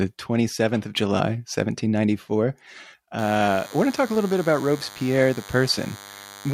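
DECT cordless phone buzz from 3.18 s to the end: nearby radio bursts every 10 ms get rectified, leaving a thin, harmonic-rich 100 Hz buzz roughly 20 dB under the speech.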